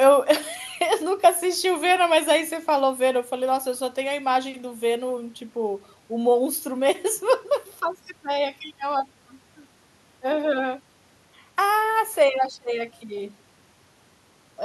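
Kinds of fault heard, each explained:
No fault is audible anywhere in this speech recording.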